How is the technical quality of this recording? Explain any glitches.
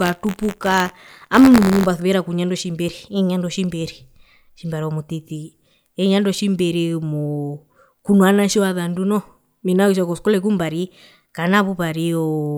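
The recording has one clear glitch, in the opening stretch of speech. From 0.00 to 1.87 s there is buffer tearing: the writer and reader of the audio buffer have slipped, so a small slice of each period, about 2 percent, replays audio from roughly 20 ms earlier, joined by hard edges. This produces a robotic buzz at 86.1 Hz, which fits a 512-sample buffer, present only while speech sounds. A waveform shows small step discontinuities every 11.6 ms, and a spectrogram shows evenly spaced vertical striations.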